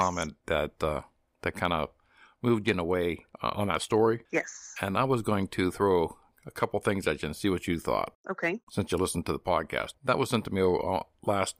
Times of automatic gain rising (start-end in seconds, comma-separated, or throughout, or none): none